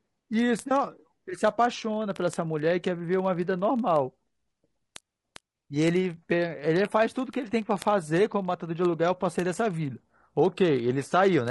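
Throughout the speech the voice sounds rough and grainy, likely from low-delay AAC compression at a bitrate near 32 kbps; a spectrogram shows noise filling gaps between harmonics. From 0.11 s to the end, word clock ticks recur roughly every 30 ms: unlocked clocks drift several hundred ppm apart, dropping or repeating single samples, seen as thin vertical spikes.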